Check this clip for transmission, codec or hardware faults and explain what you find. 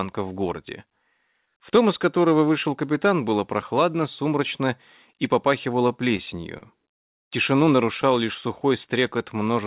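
Two kinds of jitter-buffer fault appear, heard through a call path that cuts everything above 4 kHz, which fits G.711 mu-law at 64 kbps.

Repeated stalls (stutter), 6.17–6.64 s: the buffer ran dry four times, each gap filled by continuing the last sound (longest 40 ms). Nothing is lost, but the sound catches and hiccups, unlike smooth stretching.

Jitter buffer slow-down, 8.05–8.69 s and 9.17–9.65 s: the receiver repeated single pitch periods to rebuild its reserve, slowing playback to 95% and then 90%. The sound drags evenly at unchanged pitch, without audible breaks.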